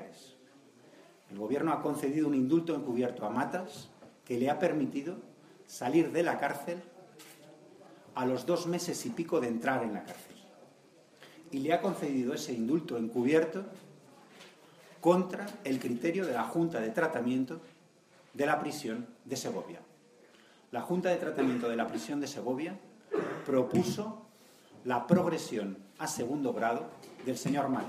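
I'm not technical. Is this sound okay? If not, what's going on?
Yes, nothing in this recording sounds wrong.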